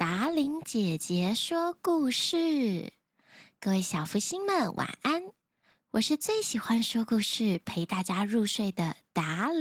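From start to finish the speech carries plainly audible Opus voice compression. It sounds like hybrid coding, with SILK below 8 kHz and a CELT layer on top, at a rate that fits about 16 kbps. The coarse excitation leaves it muffled, hoarse and faintly robotic.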